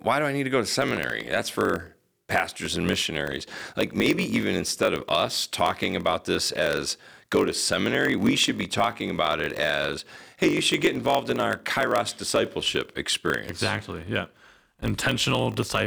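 From 0.8 s to the end, the speech carries a steady buzz at about 46.9 Hz, the sign of a block size mismatch (padded). One stage hands over blocks shorter than the 1024-sample blocks the next stage reads, and the shortfall is filled with silence, which fits 960-sample writes. Each tiny gap stretches the audio to 0.938 of normal speed, yet the timbre stays. That separates it from a sample-rate error, where speed and pitch shift together.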